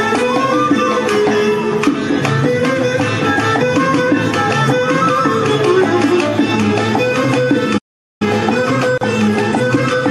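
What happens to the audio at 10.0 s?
At 10.0 s the audio is in a time-compressed catch-up that starts at 8.22 s and runs to the end at 10.1 s. After a stall, the player removes short slices of its backlog and cross-fades across each gap, so the sound plays about 1.1 times faster at its normal pitch. On a spectrogram the harmonic bands stay at the same frequencies while events sit closer together, with small smears or discontinuities at the splice points.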